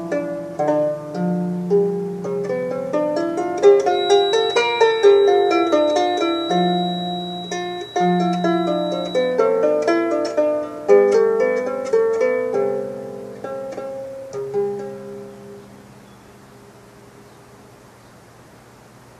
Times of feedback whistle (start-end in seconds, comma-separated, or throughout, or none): 3.84-9.39